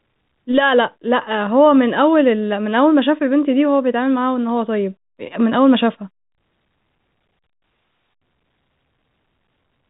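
No technical faults turn up anywhere in the speech. It comes over a G.711 A-law telephone path at 64 kbps, so the sound stops at the 4 kHz ceiling of that format, with at most a faint low-level hiss riding under the signal.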